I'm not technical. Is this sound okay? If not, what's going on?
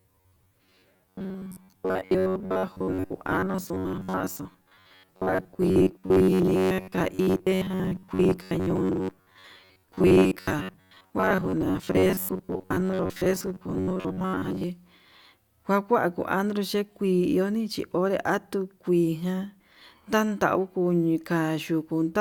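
No. From 0.01 s to 14.6 s there is robotic sound from repeated short buffers. The speech becomes a stiff, metallic buzz near 94 Hz. Audio likely arrived too slowly, so tiny 11 ms slices were replayed most of the time, skipping real sound.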